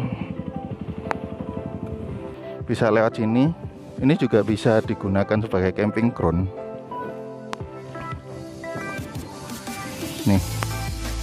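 A sudden voltage step or pulse, likely from a plug, switch, static discharge or driver glitch, lands on the signal three times, producing a loud pop at 1.11 to 1.13 s, 7.53 to 7.55 s and 10.63 to 10.65 s. Each is a single sharp crack peaking about 20 dB above the sound, which continues underneath.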